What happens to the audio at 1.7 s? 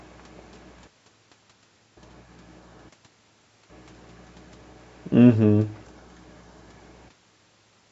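Nothing goes wrong at 1.7 s; the speech there comes through intact, with only the ordinary call microphone processing trimming the lowest bass as it does throughout.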